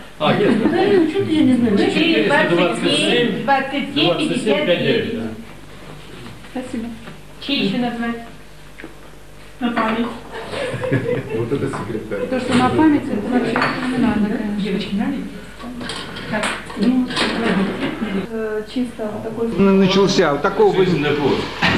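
Sample clock jitter runs through the whole recording. The converter's clock timing wanders by roughly a microsecond, so each sample is captured at a slightly wrong instant. The resulting error tracks how steeply the waveform is changing, landing at roughly 45 dB below the signal. It comes through as a fine hiss or grain riding on the sound, thickening on loud, bright passages and disappearing whenever the audio falls silent.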